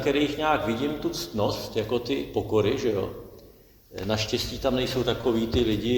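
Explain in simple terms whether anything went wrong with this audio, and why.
A short stall from a late packet happens at about 5.21 to 5.27 seconds. One chunk of the audio stream arrived late, so the player held the last sound for about 26 milliseconds until it came. Nothing is lost, but the sound briefly drags and then resumes slightly behind.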